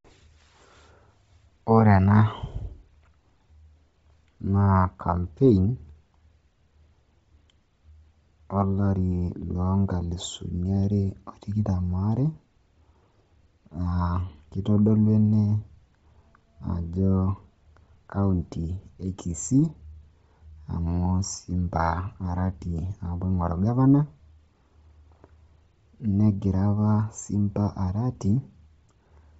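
From start to finish the speech has a breathy, grainy edge. There is nothing at all above 7.7 kHz, and the upper band shows heavy codec damage. That points to likely Bluetooth LC3 compression at a low rate, which fits roughly 24 kbps with short 7.5 ms frames: most of the top spectrum is thrown away and refilled with noise. A plain low-pass filter would leave a clean, dull top, but here that region hisses with synthetic grain.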